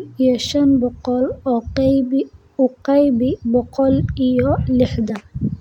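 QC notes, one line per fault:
5.09 s, compressed frames skipped: a jump near the end of the speech, where the audio lurches forward by about 20 ms instead of running on smoothly. One or more whole compressed frames never reached playback, either missing from the stream or discarded by the decoder as corrupt, so the sound jumps ahead.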